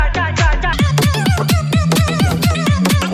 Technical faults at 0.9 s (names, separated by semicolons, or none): wrong sample rate